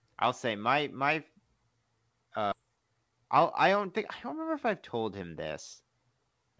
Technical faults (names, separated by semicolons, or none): skip ahead; jitter buffer speed-up